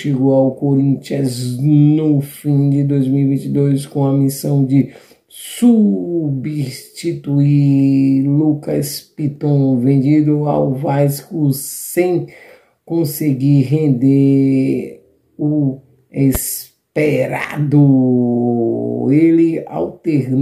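At 16.35 to 16.38 s, a sudden voltage step, likely from a plug, switch or static discharge, enters the signal path and produces a single loud pop. The thump jumps roughly 10 dB above the surrounding level, while the sound continues underneath.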